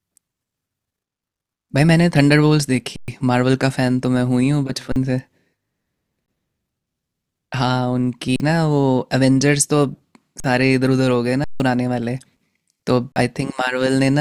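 The speech drops out seven times with an underrun with held sample: at 2.96 to 3.08 s, 4.92 s, 6.26 s, 8.36 s, 10.4 s, 11.44 to 11.6 s and 13.12 s. Most gaps last 40 ms, and the longest are 120 and 160 ms. The output buffer ran dry, so the converter held its last value. On the waveform this is a flat line, and on the spectrogram a blank vertical band. Each gap starts almost silently, and roughly the same span of live audio was lost during each.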